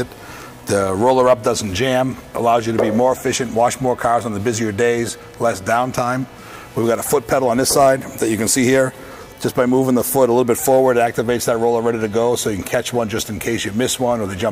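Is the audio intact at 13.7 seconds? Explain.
Yes, the audio is intact at 13.7 seconds, with no dropout, click, distortion or other fault at that moment.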